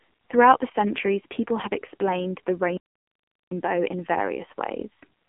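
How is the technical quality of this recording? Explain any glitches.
Pretty rough: the whole clip has gone through a mobile phone codec. The AMR narrowband mobile codec runs throughout. It rebuilds speech from a vocal-tract model at what sounds like a low rate, maybe around 6 kbps. The result is a thin 200 Hz to 3.4 kHz band with nothing above 3.6 kHz, plus heavy buzzy, synthetic damage.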